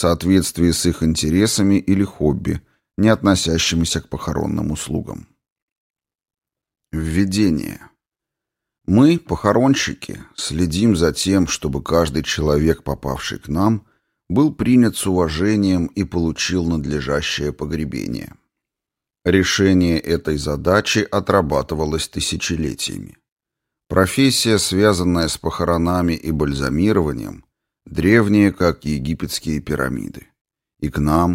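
No technical faults can be heard anywhere in the audio.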